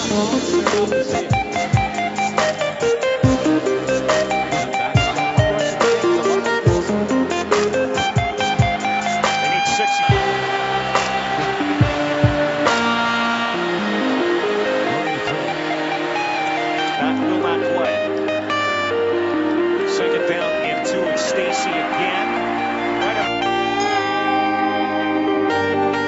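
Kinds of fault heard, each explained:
Nothing here counts as a fault: the sound just carries the usual marks of a call, with the lowest bass trimmed and nothing above about 8 kHz, exactly what you'd expect from call microphone processing and a WebRTC call path.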